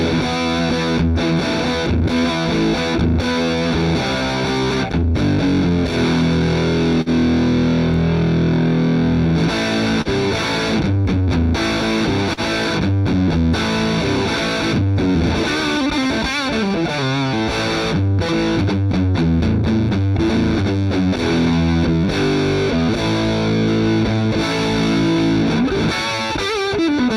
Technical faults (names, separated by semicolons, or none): clock drift between sender and receiver; repeated timing corrections; short stall from a late packet